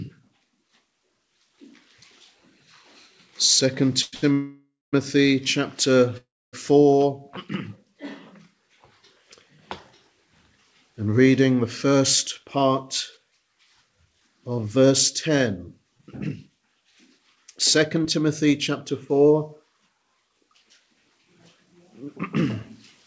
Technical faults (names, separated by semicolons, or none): call audio freeze; short stall from a late packet; jitter buffer speed-up; short concealed packet loss